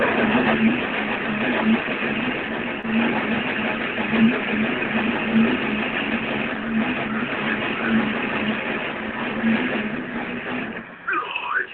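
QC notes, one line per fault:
2.81–2.86 s, short concealed packet loss: about 20 ms of audio failed to reach the decoder in time, and the receiver filled the gap by extending the preceding sound before blending back in, leaving a brief smear or wobble within the 8 kHz-limited call audio.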